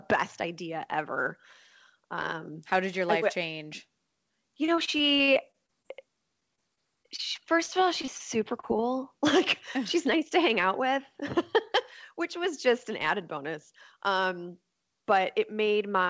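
Speech, heard through a call path whose bandwidth stops at 8 kHz, which fits a wideband codec such as G.722 at 64 kbps. From 4.66 to 5.86 s, 6.40 to 7.20 s and 7.66 to 8.22 s the speech turns choppy, with pieces dropping out. This is repeated packet loss, giving a robotic sound: holes arrive in quick succession, the longest about 44 ms, and each is patched by extending the preceding sound. At 8.60 to 8.65 s and 8.77 to 8.80 s there are brief smears instead. These are short concealed packet losses of roughly 40 and 20 ms, bridged by continuing the last sound and then blending back.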